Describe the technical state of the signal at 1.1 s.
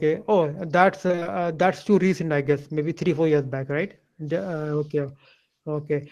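At 1.1 s the speech turns choppy and robotic, with small pieces of sound missing. This is repeated packet loss (robotic sound), running from about 1.07 to 1.27 s. Data went missing or arrived late five times in that short stretch, each hole no longer than about 23 ms. The receiver filled each gap by stretching out the sound just before it, so roughly half of the span is patched rather than real.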